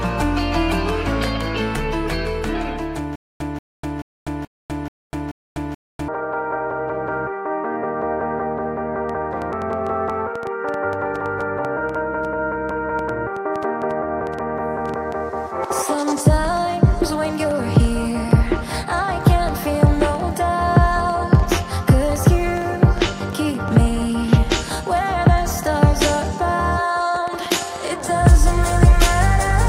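From 3.16 to 6.08 s there is a stutter with silent gaps: a 183 ms fragment of the sound repeats six times, each followed by 248 ms of digital silence, a steady 432 ms cycle. This likely comes from a stalled player or stream replaying its last buffer before running empty. Unlike clicks, the bursts are real audio, and the material between them is lost.

From 9.09 s to 29.51 s a train of clicks runs over the sound: roughly a hundred similar pulses, about 4.65 per second, unevenly spaced, peaking around 5 dB above the signal. This likely comes from electrical interference or a faulty connection or power supply. Unlike the stutter, the underlying sound continues unbroken beneath the ticking.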